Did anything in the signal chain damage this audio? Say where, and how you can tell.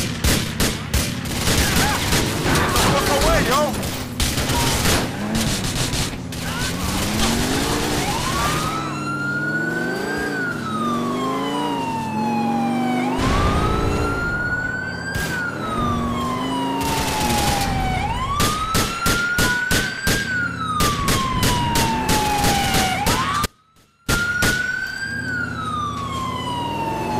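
Yes. An audio dropout to a faint residue runs from 23.46 to 24.08 s. For about 0.62 s the sound collapses abruptly to a faint trace, roughly 35 dB below its normal level, then snaps back mid-flow rather than fading. Because faint sound survives in the gap, the path after the break stayed live, which points to a momentary interruption upstream, likely in the connection or transport feeding the converter, rather than a pause in the source.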